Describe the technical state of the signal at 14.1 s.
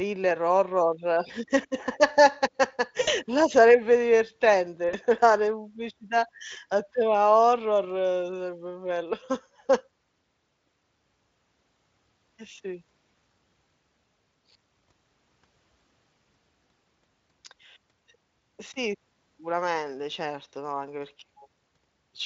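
At 14.1 s the speech is intact, with no dropout, distortion or other fault at that moment.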